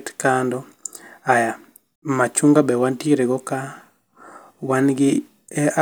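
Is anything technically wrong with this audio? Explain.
No, nothing is technically wrong with this audio.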